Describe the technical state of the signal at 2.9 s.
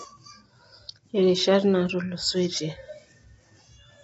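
At 2.9 s, as throughout, the speech is rough and grainy and stops at 7.8 kHz, likely from low-delay AAC compression. Its short frames smear the harmonics, unlike a clean low-pass filter.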